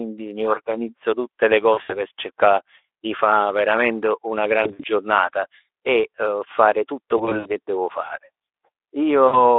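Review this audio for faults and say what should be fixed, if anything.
VoIP packet loss concealed by the speech codec occurs four times: 1.73–2.01 s, 4.63–4.86 s, 7.18–7.53 s and 9.27–9.41 s. Each burst drops 60 to 120 ms of audio, scattered over up to 280 ms, with gaps of up to 60 ms. The decoder fills each gap by repeating its last pitch and spectral shape at falling gain, so the sound smears into a short buzzy tone or coloured noise that fades. Because each frame builds on the one before, it stays thin for a moment after packets resume. The underlying Speex coding, band-limited to 300–3500 Hz and consistent with about 15 kbps, carries only light codec damage. To prevent the dropouts, enlarge the adaptive jitter buffer, add forward error correction or redundant packets, and prioritise voice traffic with QoS on the network path.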